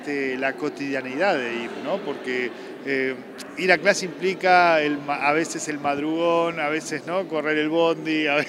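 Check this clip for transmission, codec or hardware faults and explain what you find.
No transmission, codec or hardware faults are audible here.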